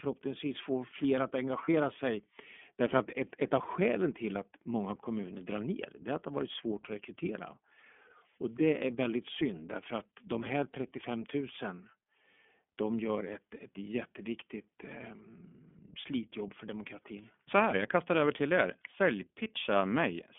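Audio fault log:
throughout, iLBC codec: The speech sounds thin and boxed-in, with a slightly rough, synthetic edge on every syllable and no air or low body. Nothing passes below about 250 Hz or above 3.4 kHz, which is the narrow telephone band this codec works in. The plainly audible roughness comes from each short block of excitation being coded on its own at a low rate, which fits roughly 13.3 kbps with 30 ms frames.
1.64 to 1.69 s, lost iLBC frame: Right after "få fler att" the sound briefly smears into a held, faintly buzzy vowel-like tone for a few hundredths of a second, then snaps back to normal. That fits a single lost 30 ms frame. The decoder filled the gap by repeating the last pitch cycle mixed with a little noise. Because each iLBC frame is decoded without depending on the one before it, the voice recovers at once rather than staying blurred.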